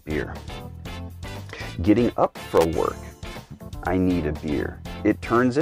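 Around 2.56 to 2.65 s there's a quick burst of loose connector crackle, a worn contact making and breaking, chopping the signal into irregular scratchy noise.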